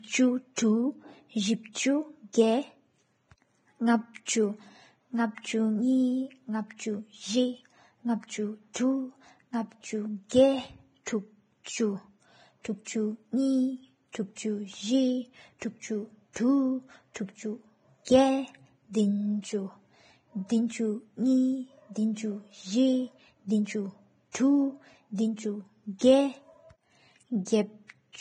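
Vorbis compression, likely the cause of the damage heard throughout this speech recording, leaves nothing above 9.7 kHz and quantises the remaining treble so coarsely that its detail turns to grainy hiss, roughening tones and blurring onsets, which fits a bitrate of around 20 kbps. Pre-echo appears at 8.74–8.76, 10.29–10.31, 14.12–14.15, 18.05–18.07, 24.32–24.35 and 25.99–26.01 s, where a brief hiss of 20 to 29 ms runs ahead of sharp attacks because the codec spreads each block's quantisation noise into the quiet moment before the onset, softening it.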